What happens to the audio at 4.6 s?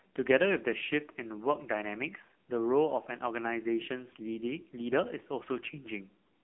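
At 4.6 s the speech carries the AMR narrowband mobile codec, present throughout. Nothing passes above 3.5 kHz. The heavy buzzy, synthetic texture points to a low bitrate near 6.7 kbps.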